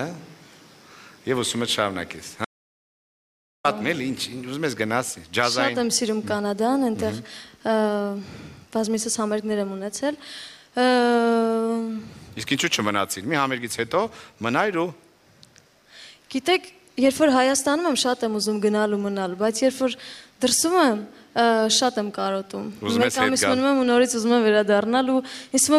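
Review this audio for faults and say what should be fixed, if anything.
The input feed was most likely interrupted for just over a second, through a loose connection, a failed link or an accidental mute, while the recorder kept writing silence. The result is an audio dropout to silence from 2.45 s to 3.64 s: the sound cuts off abruptly, leaves about 1.19 s of total silence with no room tone underneath, then resumes mid-flow, and whatever happened in that gap is unrecoverable. To prevent it, secure cables and wireless links, lock mute controls, and monitor input levels live during recording.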